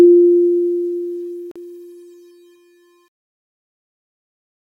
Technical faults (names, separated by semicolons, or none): Bluetooth dropout